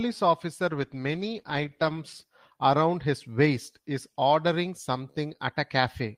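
Speech with a call bitrate drop from 0.7 to 2.07 s, going rough and muffled, which fits the encoder falling from 32 to 14 kbps.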